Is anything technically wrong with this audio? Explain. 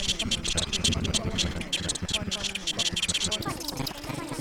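Yes. From 3.41 s to the end at 4.40 s, a section plays at the wrong speed: about 1.59 times too fast, likely from being clocked at the wrong rate, so pitch jumps roughly seven semitones and timing hurries together, unlike a pitch shift, which leaves tempo unchanged.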